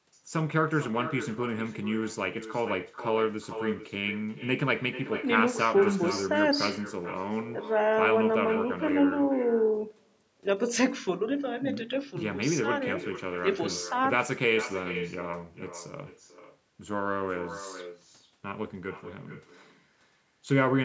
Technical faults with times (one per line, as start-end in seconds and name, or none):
0.00-20.84 echo with no canceller